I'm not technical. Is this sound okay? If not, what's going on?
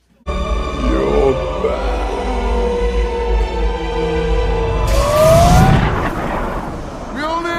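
Yes, nothing stood out as wrong when listening to this.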